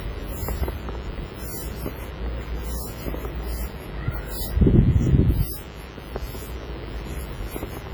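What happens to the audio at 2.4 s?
At 2.4 s a mains buzz runs under the sound, as it does throughout: switching spikes at 50 Hz harmonics give a raspy buzz about 20 dB below the signal.

The audio is also heavily smeared, ringing and washy, with hiss breathing alongside it. The likely cause is WMA compression, whose long transform blocks spread quantisation noise, consistent with roughly 24 kbps.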